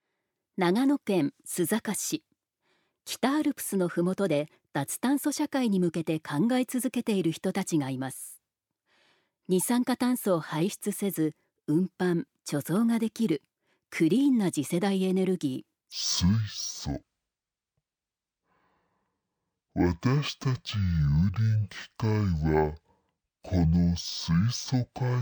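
From 15.92 s to the end, the sound suddenly drops an octave and crawls at half speed, with a faint mirrored image in the upper spectrum. This is stereo read as mono: interleaved left and right samples were played back one after another as a single channel.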